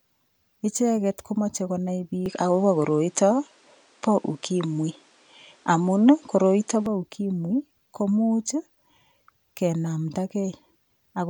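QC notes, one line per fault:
2.26–6.86 s, input switched to a poorer device: after "icheget komochei konai" speech goes dull, nothing above 10.5 kHz, faint new hiss, level shifts about 5 dB, likely a different mic, back to normal by "bo ukimwi komuuch".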